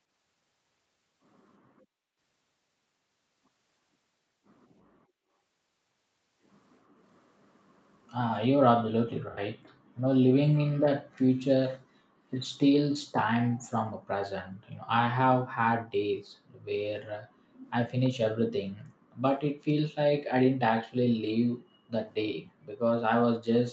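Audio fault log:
18.04–18.10 s, echo leak: a faint, brief delayed copy of the speech, about 330 ms late and roughly 25 dB down, likely from an incomplete echo canceller; a weak repeated smear on the spectrogram.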